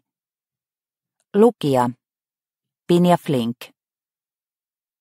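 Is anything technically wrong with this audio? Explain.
No technical faults are audible.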